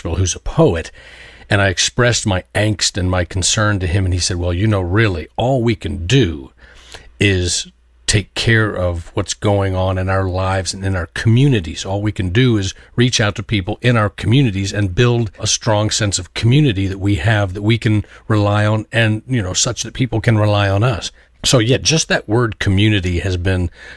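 No technical faults are audible anywhere in the speech recording.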